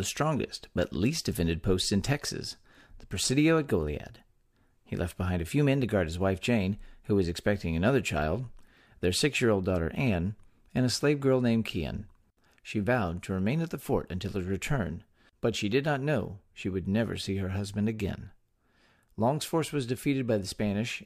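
No technical faults occur anywhere in the speech, so there is nothing to describe in time order.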